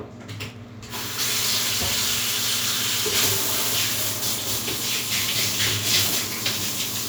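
No technical faults are audible.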